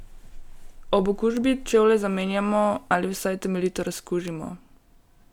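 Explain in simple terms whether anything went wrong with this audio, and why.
Two sharp little ticks cut through the speech, one at 1.37 s and another at 4.28 s. Each is a bit error spike: a single digital bit got flipped, so for a split instant the sound value jumped far off and snapped straight back.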